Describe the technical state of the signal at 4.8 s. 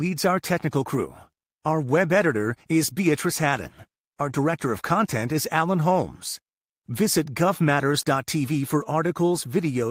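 At 4.8 s the speech signal is intact, with no audible fault at that moment.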